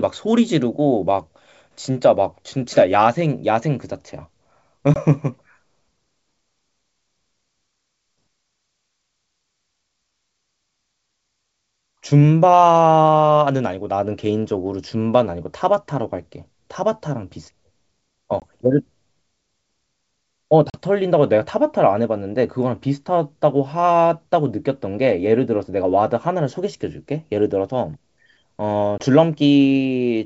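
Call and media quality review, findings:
Packet loss on an ADPCM call: hard-edged silent gaps at 4.94, 18.40 and 28.98 s (20 ms each) and 20.70 s (40 ms, about two packets). Decoder predictor and step size drift from sender's; speech resumes slightly distorted, then resettles. G.722 wideband path, 64 kbit/s.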